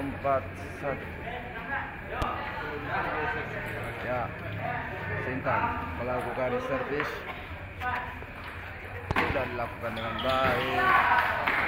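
Two loud pops cut through the audio. The first is a single sharp pulse from 2.22 to 2.24 s, standing roughly 15 dB above the surrounding signal. The second is a double pop spread between 9.11 and 9.33 s, peaking about 20 dB above it. The underlying sound continues beneath both. The cause is likely a brief voltage step or spike, such as a connector being plugged in, a switch, static discharge or a driver glitch, shaped by the downstream circuitry.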